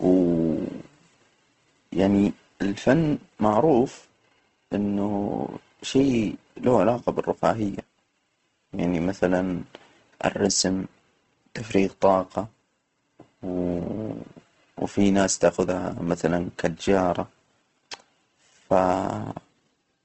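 From start to finish the speech sounds rough and grainy, with a fizzy noise texture sitting inside the voice rather than the swirling, hollow artefacts of MP3, and nothing is heard above 8.2 kHz, so the top end is clipped off. This is likely Opus compression in its music (CELT) mode at a low bitrate, around 16 kbps. The encoder runs short of bits, so it fills upper bands with noise or folded copies of lower ones, which produces the grain.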